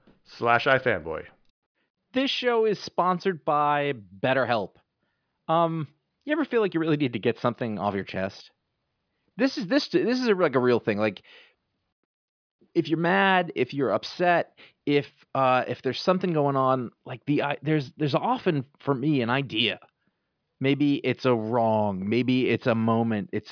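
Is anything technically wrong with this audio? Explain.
No, nothing technically wrong stands out anywhere in this speech recording.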